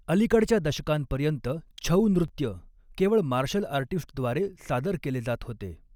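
At 2.28 s a repeated buffer occurs. New audio arrived late, so a 10.7 ms piece played twice, which fits a 512-sample buffer. It sounds like a brief click or buzz.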